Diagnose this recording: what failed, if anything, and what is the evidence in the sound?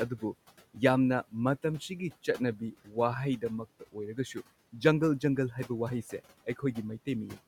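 Call processing: speech cut by the noise suppressor from 0.09 to 7.38 s, soft passages mistaken for noise and pulled down up to about 16 dB, roughly one second.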